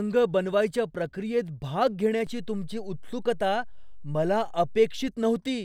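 A low thump at 2.27 s and another at 5.08 s bracket a DC step, while the speech carries on unchanged. The waveform's zero line jumps by about -35 dBFS, holds, then returns, as when a converter recalibrates.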